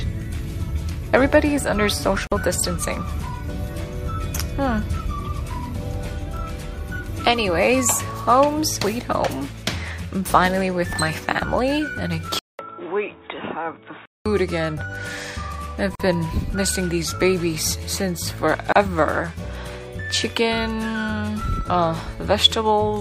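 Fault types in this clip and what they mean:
gap at a join of encoded pieces: separately encoded segments were joined without trimming encoder start delay and end padding, so silences of 46, 44 and 33 ms cut into continuous sound at 2.27, 15.95 and 18.72 s, edges smeared, then resume where it stopped.
input switched to a poorer device: from 12.39 to 14.26 s, after a 200 ms silence, the sound turns dull and boxy with nothing above 3.8 kHz, slightly quieter, with faint new background noise; likely the input moved to a narrower-band microphone or headset call profile.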